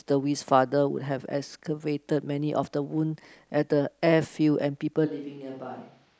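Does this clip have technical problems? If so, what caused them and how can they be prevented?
Yes. From 5.08 s to the end, the close microphone likely dropped out, forcing a switch to a distant microphone. The speech turns suddenly hollow, roomy and thinner, about 10 dB quieter, with more room noise. Monitor the close microphone's feed and record a backup track from it.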